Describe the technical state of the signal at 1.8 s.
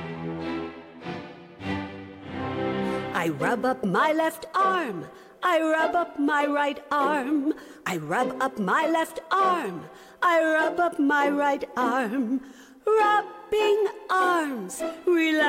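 At 1.8 s the signal is intact, with no dropout, distortion, glitch or other audible fault at that moment.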